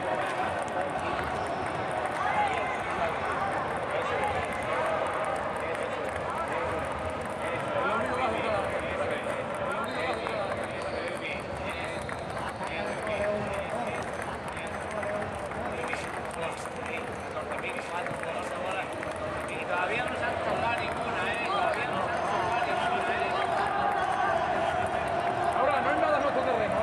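A doubled audio track runs throughout: a full-band copy trails about two seconds behind, roughly 5 dB quieter, likely from a second, slower capture path, showing as repeated, offset waveform and spectrogram patterns.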